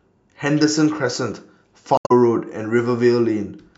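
At about 1.95 s, running to 2.12 s, the speech hits a patch of damaged data in the compressed stream. The decoder can't make sense of those frames, drops sync and hunts for the next valid header, so you get a short glitch.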